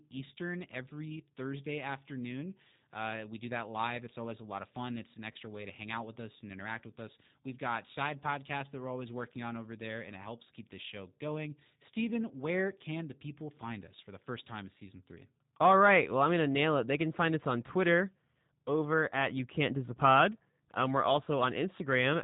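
A speech recording carried through a G.729 codec at 8 kbit/s, with plainly audible coding damage throughout. The model rebuilds speech from a vocal tract filter and a sparse pulse excitation, so the voice sounds rough and slightly synthetic, and nothing above 4 kHz survives. At 5.33 s, VoIP packet loss concealed by the speech codec drops about 20 ms of sound, which fits a single lost packet. The decoder extends its last pitch and filter at falling gain, giving a brief buzzy or noisy smear that lingers until about 5.37 s.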